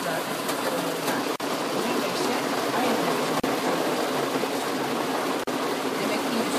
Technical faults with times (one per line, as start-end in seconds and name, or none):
1.36-1.40 gap at a join of encoded pieces
3.40-3.44 gap at a join of encoded pieces
5.44-5.47 gap at a join of encoded pieces